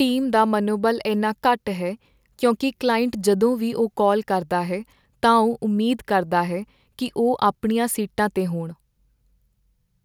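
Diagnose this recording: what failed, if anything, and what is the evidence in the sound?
Nothing failed; no fault is audible in this recording.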